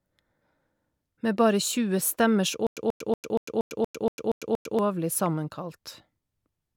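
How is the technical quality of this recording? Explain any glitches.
The recording has one clear glitch. A stutter with silent gaps runs from 2.67 to 4.79 s. The playback likely stalled and replayed its last fragment at each retry. A 135 ms burst of speech repeats nine times, each followed by 100 ms of dead silence, and the speech in between is lost.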